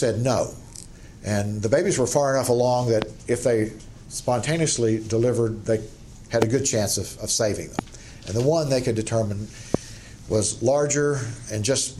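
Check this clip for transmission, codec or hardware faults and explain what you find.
Four loud pops are present, at 3.02–3.04 s, 6.42–6.44 s, 7.79–7.81 s and 9.75–9.77 s. Each is a single sharp thump about 20 dB above the sound, which continues underneath. The likely cause is an electrical voltage pulse from a switch, static or driver glitch.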